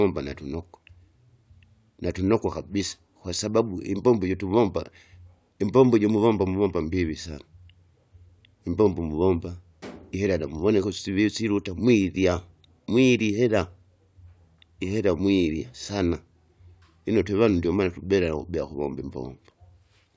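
No technical faults can be heard anywhere in the speech recording. Nothing at any point stands out as a problem in how the audio was captured, processed or delivered.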